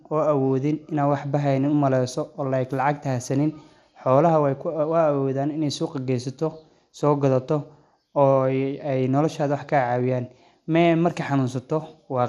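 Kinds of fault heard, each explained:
MP2 compression: throughout, the speech is dull and gurgly with nothing above 13.7 kHz, likely Layer II sub-bands starved of bits, fitting an 80 kbps rate.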